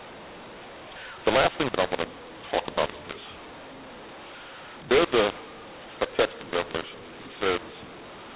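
Mu-law and A-law mixed up, throughout: mu-law-coded telephone speech is decoded as A-law, scrambling sample levels, so the speech sounds harsh and distorted and pauses fill with noise.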